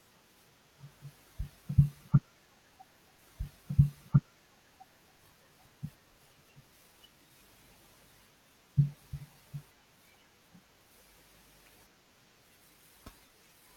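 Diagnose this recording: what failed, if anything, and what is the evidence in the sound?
At the playback stage, the streaming player queued the same segment twice, a stream segment repeated. In this speech clip, the audio from 3.18 s jumps back and replays about 2.0 s of material until 5.18 s, with a brief blip marking the splice where playback restarts.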